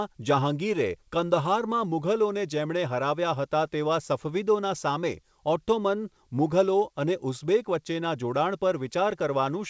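Nothing's wrong with this bit of speech; it came through a call connection, and the way the sound stops at about 8 kHz fits a wideband codec like G.722 doing its normal job.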